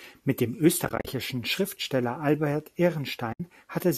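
AAC frame loss with muting occurs twice. The decoder lost frames and zeroed their spectrum, so the overlapping windows fade the speech out and back in softly. From 0.85 to 1.07 s, about 130 ms go missing in scattered gaps, the longest roughly 40 ms. From 3.33 to 3.40 s, 70 ms of frames are lost, their short-frame granularity fitting a likely low-delay AAC stream.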